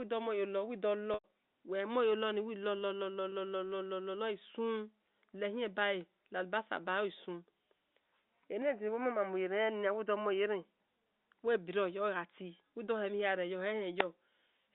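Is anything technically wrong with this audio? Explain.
Yes. The speech shows two kinds of fault on top of a telephone-band line.

Packet loss with pitch repetition occurs at 1.14 to 1.24 s, a gap of about 100 ms, and again at 3.30 s, a brief 20 ms dropout. The longer gap fits roughly five consecutive 20 ms packets going missing. To bridge each hole, the receiver loops the last pitch period. At 3.30 s this is a momentary held, buzzy tone. At 1.14 s the repetition runs past its fade-out of about 50 ms, decays toward silence, and then the speech cross-fades back in.

From 8.62 to 10.65 s the tone changes abruptly. The likely cause is the input being switched to a poorer device. There is no silence at either switch and the level stays about the same, but the band narrows, with nothing above 3.1 kHz, so the speech turns dull and boxy. A faint new background noise also appears, about 45 dB below the speech. 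The fuller sound returns at 10.65 s.

The G.711 A-law coding, at 64 kbps with a 200 Hz to 3.7 kHz band, accounts for the telephone-limited bandwidth heard throughout.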